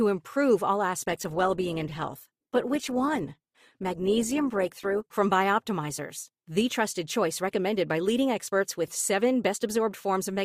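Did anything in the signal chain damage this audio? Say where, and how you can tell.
Yes. The damage comes from the network side, where the adaptive stream dropped to a lower bitrate. From 1.02 s to 5.02 s the speech suddenly takes on heavier codec artefacts, then snaps back to full quality. The sound points to a switch from roughly 64 kbit/s Opus down to about 16 kbit/s. Packet loss would leave gaps or concealment glitches. Here the audio never breaks, and the quality step is abrupt at both edges.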